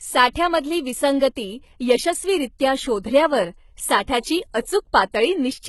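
Throughout, the treble sounds rebuilt rather than real: s sounds turn gritty and metallic, with nothing above 11.8 kHz. This is likely heavy HE-AAC compression, fitting a bitrate near 16 kbps.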